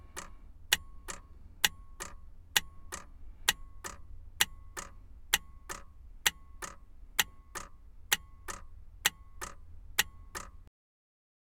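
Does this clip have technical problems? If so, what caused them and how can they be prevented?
Yes. Cut-off end at 10.68 s: the final buffers were never written, so the sound stops mid-event and drops straight to digital silence without any decay. Prevent it by flushing and closing the recording or export stream fully before stopping.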